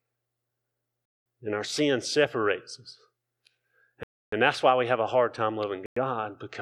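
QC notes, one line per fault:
1.05–1.26 s, Bluetooth stall: speech drops to silence for about 205 ms, then resumes; likely interference delayed packets until the headphone buffer emptied.
4.03–4.33 s, Bluetooth stall: a longer 291 ms gap cuts the speech dead before it picks up again, likely from held-up packets starving playback.
5.86–5.97 s, Bluetooth stall: a brief 105 ms silence interrupts the speech, likely a short wireless dropout draining the buffer until resent packets arrived.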